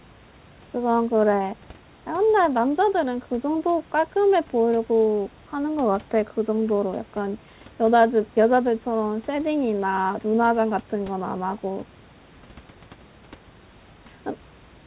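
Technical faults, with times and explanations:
No technical faults can be heard in the speech. The call path limits the sound to nothing above 4 kHz, which fits G.711 A-law at 64 kbps, and the room noise sits about 31 dB below the speech.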